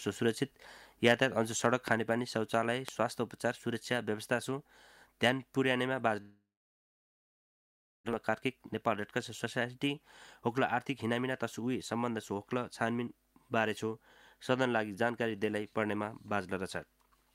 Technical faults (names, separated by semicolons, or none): loud pop; long network dropout; jitter buffer speed-up